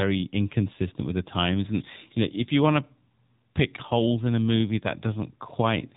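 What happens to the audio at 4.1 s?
AMR narrowband mobile codec coding, present at 4.1 s and across the whole clip: the speech is squeezed through a vocal-tract model excited by a few pulses per frame, cutting everything above 3.8 kHz and leaving a buzzy, synthetic tone that fits a low 7.4 kbps mode.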